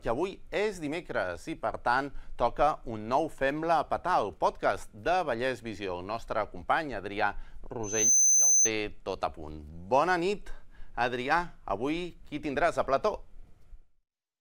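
At 7.83 s a loudspeaker feedback squeal begins and runs to 8.71 s. A microphone is picking up the loudspeaker it feeds. At 6.2 kHz the loop gain climbs past one, so that frequency feeds on itself. It swells from nothing in roughly a third of a second. Then it sits as a piercing single tone, around 10 dB louder than the rest of the sound. It stops at 8.71 s.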